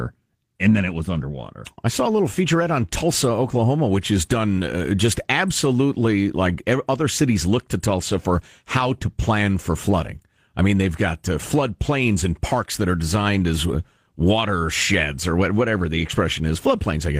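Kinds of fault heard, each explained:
No technical faults are audible.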